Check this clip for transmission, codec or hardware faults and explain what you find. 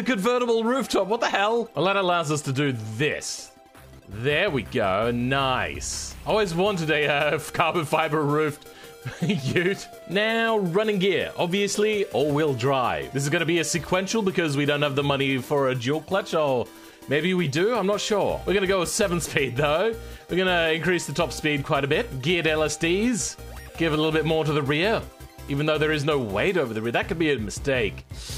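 Nothing here points to a transmission, codec or hardware problem; it all sounds the way it should.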